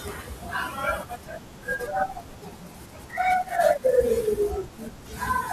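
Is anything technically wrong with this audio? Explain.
No, nothing technically wrong stood out on listening to this speech clip.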